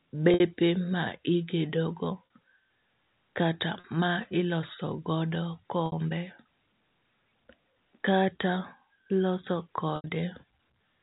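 Packet loss with pitch repetition at 0.34, 2.26, 3.80, 5.86 and 9.96 s: the receiver bridged 40 to 80 ms gaps by repeating the last pitch period, so at the 40 ms gaps the speech briefly holds a slightly buzzy, sustained tone, while the 60 and 80 ms gaps fade into silence before the speech returns with a short cross-fade.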